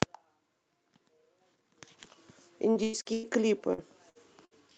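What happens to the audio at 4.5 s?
A burst of packet loss hits the speech from 4.45 to 4.54 s. The receiver conceals about 60 ms by extending the last received sound and fading it, then resumes later in the stream, so roughly 60 ms of speech is skipped.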